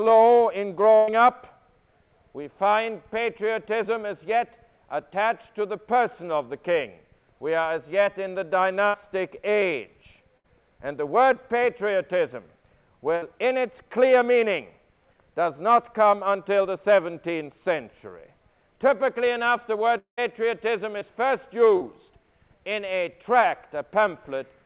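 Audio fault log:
0.96–1.10 s, 8.88–8.96 s, 10.38–10.46 s, 13.16–13.24 s, burst of packet loss: a run of packets went missing, about 120 ms at first and 60 ms later. The receiver extended the last sound and let it fade, so each gap becomes a held buzz or hiss before the audio resumes further ahead. The audio is capped near 4 kHz, which fits a narrowband G.711 call codec.
19.98–20.19 s, long network dropout: about 200 ms of audio is missing. A fading continuation of the last sound lasts briefly, then roughly a tenth of a second of silence follows before sound returns further on. The likely cause is the network stalling and no packets arriving for that stretch.
20.99–21.03 s, 21.77–21.83 s, short concealed packet loss: about 20 ms and then 40 ms failed to reach the decoder in time. Each hole was filled from the preceding sound and blended back, heard as a brief smear or wobble rather than a gap.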